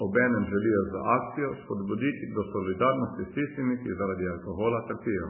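From start to end, the speech sounds heavily compressed, most likely by MP3 compression. Nothing remains above 3 kHz. The encoder was starved of bits, which fits a very low bitrate near 8 kbps. Weak detail flickers in and out, giving a watery, swirly tone.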